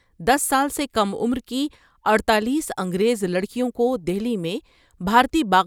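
No technical faults are audible anywhere in the recording.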